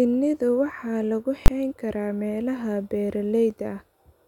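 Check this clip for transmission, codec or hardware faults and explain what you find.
One fault stands out in the speech: invalid numbers at full scale from 1.46 to 1.48 s. For this 20 ms block, a calculation in the processing chain produced infinite or invalid values, which were clamped to maximum amplitude. Because the block is so short, it is heard as a single sharp bang. On the waveform it appears as a flat slab held at one extreme value, far beyond the speech peaks; on a spectrogram, as a bright full-height vertical stripe.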